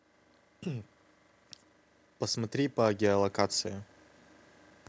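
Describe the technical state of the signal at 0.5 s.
At 0.5 s the speech is intact, with no fault at that moment, and it carries the ordinary shape of call microphone processing, with the lowest bass trimmed and nothing above 8 kHz.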